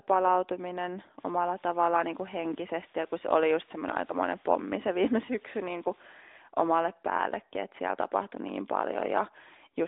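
From 1.18 s to 6.05 s a steady, even hiss sits under the speech, roughly 30 dB below it, with no gritty distortion. It ends just before "omalle päällekin että siellä". This is low bit depth with dither: the samples were rounded to very few levels, which fits about 8 bits, and dither noise added before rounding turned the error into this constant hiss.

Around 5.26 s to 5.29 s, inside that hissy stretch, the sound briefly dips and wavers for about 20 ms, then carries on. This fits a single lost AMR speech frame: the narrowband AMR decoder, band-limited to telephone range, filled the gap by reusing the previous frame's settings at lower gain.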